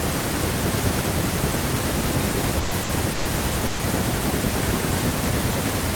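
Speech breaks into a held buzz or fading hiss at 2.59–2.74, 2.83–2.92, 3.13–3.28 and 3.67–3.82 s, then jumps ahead. Each is a burst of packet loss: the receiver stretched the last sound over 120, 60, 120 and 120 ms, and that much speech is gone.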